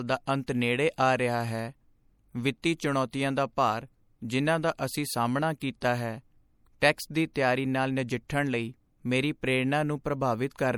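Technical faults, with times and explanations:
Throughout: MP3 compression. The speech carries plainly audible codec damage: a watery, swirling texture where weak spectral lines drop in and out between frames, metallic edges on sibilants, and softened consonant onsets. The damage level fits a low bitrate of around 64 kbps, where the encoder starves quieter frequency content to preserve the loudest parts. Nothing is present above 20.3 kHz. The likely cause is lossy MP3 encoding.
3.11 s and 5.60 s: pre-echo. The first occurs just before "ਦਾ ਭਾਰ ਜਿਨ੍ਹਾਂ ਦਾ", and the second between "ਜਿਨ੍ਹਾਂ ਦਾ ਅਸੀਂ ਸਾਹਮਣਾ" and "ਹੈ ਟੈਕਸ ਦੀ". In each case a brief hiss leads a sharp onset, spreading about 19 ms and 16 ms ahead of it. The attack falls late in a transform block, so quantisation noise sized for the loud onset also fills the quiet moment before it, smearing the attack.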